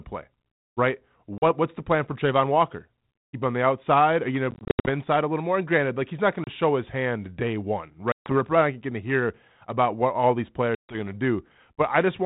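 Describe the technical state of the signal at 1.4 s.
At 1.4 s there is packet loss on an ADPCM call, running from 1.38 to 1.44 s. About 40 ms of audio drops out, which fits a handful of lost packets. The gap is filled with silence and has hard edges. The decoder's adaptive predictor and step size no longer match the sender's. So the speech resumes with brief, slight distortion. The 32 kbit/s G.726 coding carries on either side of the gap.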